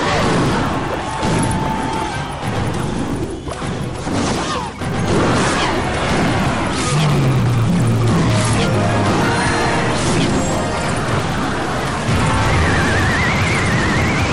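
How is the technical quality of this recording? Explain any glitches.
The quality suffers from one fault that runs through the whole recording: the resampler restarts on every block. The sample-rate converter, likely doubling the rate as from 24 kHz to 48 kHz, processes each 20 ms block in isolation, so it lacks the neighbouring samples at every block edge. Each edge gets a small error, heard as a 50 Hz buzz that appears whenever sound is present.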